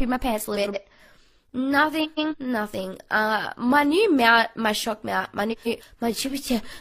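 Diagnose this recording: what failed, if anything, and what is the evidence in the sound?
Garbled flutters at 0.55–0.76, 2.04–2.34 and 5.52–5.82 s: frames out of order, neighbouring blocks swapped in transit, decoded in the swapped order.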